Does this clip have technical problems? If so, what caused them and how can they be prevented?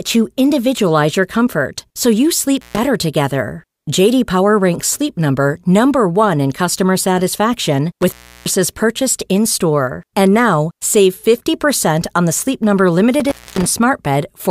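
Yes. Intermittent contact drops the speech out at 2.57–2.78 s, 8.02–8.53 s and 13.20–13.67 s, with the line open for about 140, 340 and 250 ms, crackling at each break and leaving faint hiss. Reseat or replace the loose cable or connector before recording.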